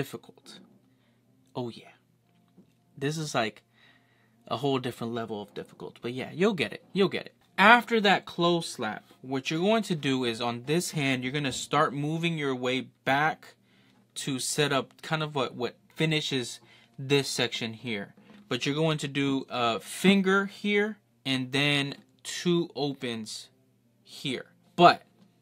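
No dropouts, glitches, distortion or other technical faults can be heard anywhere in the signal.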